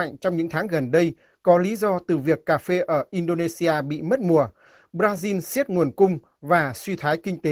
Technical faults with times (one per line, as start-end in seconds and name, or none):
0.00-7.51 Opus voice compression